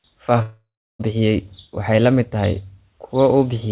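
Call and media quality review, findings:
Long network dropout, 0.42 to 1.01 s: last sound smeared into a fading buzz, then about 0.32 s of silence, audio resuming at "bixiyay waxay la mid" with roughly 0.58 s missing. Likely jitter-buffer underrun with concealment giving out. Unlike a short packet-loss glitch, the fill decays to silence. Call path: nothing above 4 kHz, which fits narrowband G.711 at 64 kbps.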